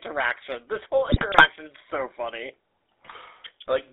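Throughout, the GSM full-rate codec gives the speech a buzzy, gravelly roughness, its coarse pulse-driven excitation plainly audible within a 300 Hz to 3.7 kHz band. GSM bit errors corrupt decoded frames from 1.04 to 1.47 s and again from 3.04 to 3.13 s, bending the spectrum into squawks, pops and gargling.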